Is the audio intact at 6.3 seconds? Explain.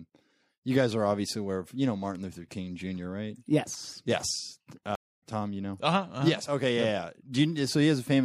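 Yes, the audio is intact at 6.3 seconds, with the speech there carrying no audible dropout, click, distortion or other technical fault.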